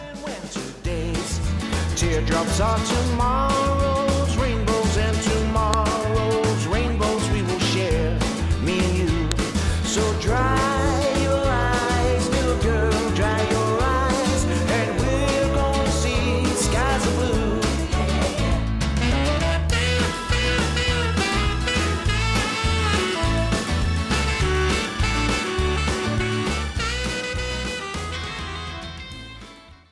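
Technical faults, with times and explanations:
5.74 s and 9.32 s: file header played as audio. Each moment brings a sharp, loud click or snap lasting about a millisecond, cutting through regardless of what the sound is doing at that instant. These are the joins between separate pieces, where each piece's WAV header was left in place rather than stripped. Those few dozen bytes of file metadata were read as sample values, producing an abrupt, unrelated burst at each boundary.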